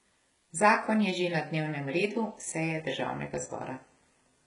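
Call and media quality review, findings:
HE-AAC compression, throughout the clip. Speech treble sounds gritty and metallic, s sounds lispy, heavy coding damage, nothing above 11.1 kHz. Likely an HE-AAC v2 encoder at a rate fitting about 12 kbps. Treble rebuilt by spectral band replication from copied lower bands, so harmonics misalign across the crossover.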